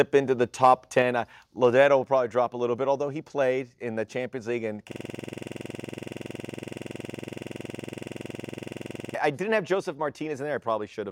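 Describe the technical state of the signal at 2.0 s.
At 2.04 s the whole signal, the speech and the background with it, drops suddenly by about 3 dB in a single step, just before "probably drop a little". The step is instant, and everything after it sits uniformly lower. This is a microphone volume stepped down. The likely cause is the call software judging the microphone input too hot and lowering the device's input volume in one jump.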